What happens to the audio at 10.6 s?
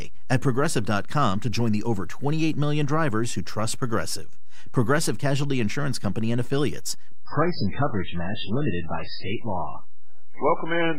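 At 10.6 s the speech is inside a stretch of adaptive stream at a lower bitrate. It runs from 7.26 s to the end of the clip at 10.98 s. The connection slowed, so the player switched to a cheaper encoding of the same audio. The quality change is sudden, with no gap. Nothing is left above 5.2 kHz, so the speech sounds dull and smeared. Codec artefacts rise, which fits a drop from around 128 kbit/s MP3 to about 8 kbit/s.

A DC offset is also present here, as it is throughout the clip. The whole waveform sits shifted away from zero by a constant amount. You cannot hear it as a sound. It eats into headroom, though, and shows up as steady energy at the very bottom of the spectrum.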